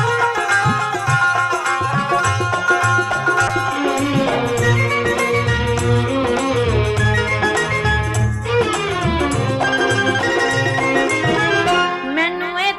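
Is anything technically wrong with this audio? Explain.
Yes, there's a call bitrate drop from 3.49 to 7.07 s. The encoder gets squeezed, which fits roughly 96 down to 22 kbps, so the sound goes coarse and rough for a while.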